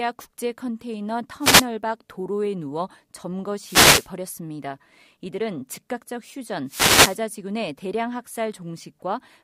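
Wireless microphone noise hits occur at 1.39 to 1.66 s, 3.62 to 4.10 s and 6.66 to 7.21 s. Each time, the radio signal fades as reflections cancel. Receiver noise rises over the speech. Each sounds like a brief swish of static.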